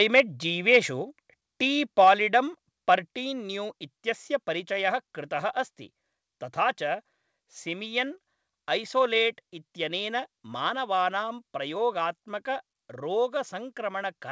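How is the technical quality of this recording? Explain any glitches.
One glitch stands out, at the very start of the speech; the band stops at 8 kHz, as expected from a G.722 call path.

From 0.15 to 0.21 s the loudest peaks turn harsh and crackly. This is likely microphone overload: input about 5 dB too hot, so the converter shaved off the waveform tops.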